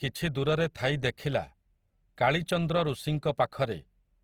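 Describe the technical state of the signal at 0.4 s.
At 0.4 s the speech is likely passing through Opus compression in its music (CELT) mode, across the whole clip, at a rate that fits roughly 24 kbps. Starved bands are filled with folded or noise content, so the voice sounds plainly grainy, rough and noisy rather than hollow.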